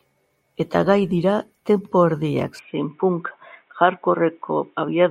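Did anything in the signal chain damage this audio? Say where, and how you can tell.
Yes. At 2.59 s, right after "gai dira tempo erdiak", the speech abruptly loses everything above 3.8 kHz and stays dull and boxy to the end, with no gap at the transition and no obvious jump in level. A faint new noise floor, roughly 50 dB below the signal, arrives with it. This points to an input switched to a poorer device at the driver stage, likely a change to a headset's narrowband call profile or another microphone.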